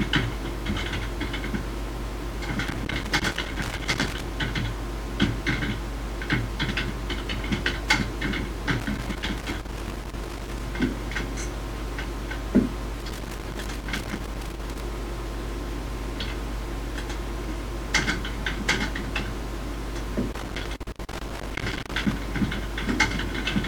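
Loose connector crackle breaks in four times, from 2.68 to 4.23 s, 8.80 to 10.60 s, 13.00 to 14.80 s and 20.32 to 22.12 s. A worn or dirty contact is intermittently opening and closing, chopping the signal into irregular bursts of scratchy crackle.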